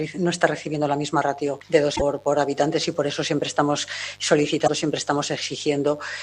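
Mains buzz runs through the whole clip, a steady raspy hum sitting around 30 dB below the audio itself. It is built on 50 Hz, and the rasp comes from the harmonics stacked above it. Those harmonics arise when something like a dimmer, a rectifier or an unshielded cable lets sharp switching spikes into the signal twice per mains cycle, which spreads energy far up the spectrum instead of leaving a pure low tone. Damaged data in a compressed stream shows up twice, from 1.95 to 2.02 s and again from 4.64 to 4.70 s, each as a brief chirp, squawk, click or short hole of roughly 60 to 70 ms. At those points part of the encoded stream is corrupt, so the decoder misreads or drops the affected frames and briefly loses sync until it locks onto a valid frame header again.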